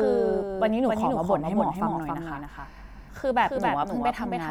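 From start to end, the speech carries a doubled audio track. A second full-band copy trails about 300 ms behind, roughly 5 dB quieter. It has no decay or room colour. It likely comes from a slower capture path or misaligned edit.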